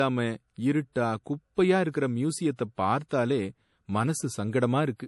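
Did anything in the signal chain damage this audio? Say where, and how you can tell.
Yes, at the codec stage, throughout the speech: nothing is present above 11.5 kHz, and low-bitrate MP3 artefacts persist. This is likely low-bitrate audio saved at a high bitrate, a roughly 48 kbit/s encode re-saved near 192 kbit/s, which cannot restore discarded content.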